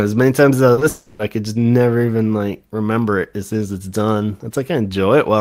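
Short concealed packet loss occurs at 0.73 to 0.79 s and again straight after at 0.79 to 0.83 s: about 40 ms and then 20 ms of speech failed to arrive, and the decoder bridged each gap by extending the preceding sound, leaving a brief smeared wobble.

A long network dropout follows from 0.89 to 1.21 s. For roughly 300 ms the speech is replaced by a synthesised continuation that drifts into a fading buzzy tail rather than silence, most likely because a long run of packets was lost. The original audio in that stretch is gone when speech resumes.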